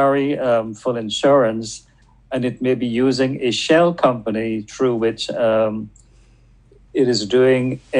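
No technical faults can be heard anywhere in the clip. Nothing in the audio calls for a timestamp or a value.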